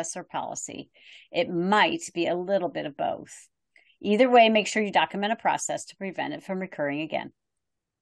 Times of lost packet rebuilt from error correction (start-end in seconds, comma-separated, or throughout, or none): none